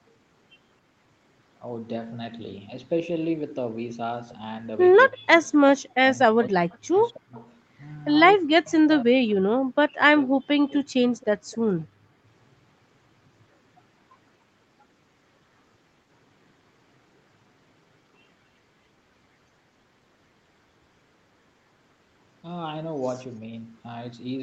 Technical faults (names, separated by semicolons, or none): speech suppressed in double talk; echo leak